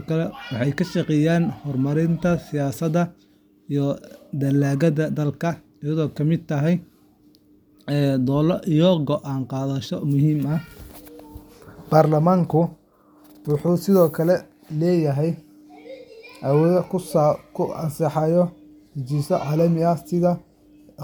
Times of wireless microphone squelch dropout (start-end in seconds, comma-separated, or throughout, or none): none